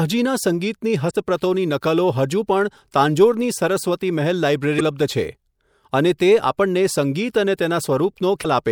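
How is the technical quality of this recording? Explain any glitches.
The speech has three short glitches from damaged data in a compressed stream, at 1.07 s, 4.77 s and 8.41 s, each lasting about 40 ms. Corrupted frames confuse the decoder until it resyncs, producing a chirp, squawk, click or short hole.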